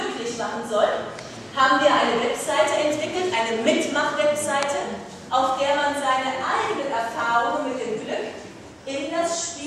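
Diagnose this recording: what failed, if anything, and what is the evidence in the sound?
Nothing in the recording points to a failure at any stage of the chain. There is no audible evidence to diagnose, so no stage calls for attention.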